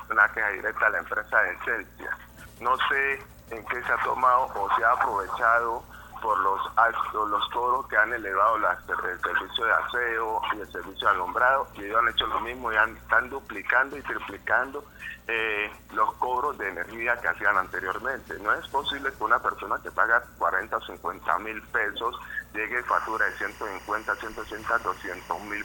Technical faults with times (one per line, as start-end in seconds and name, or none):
22.88-25.64 timecode bleed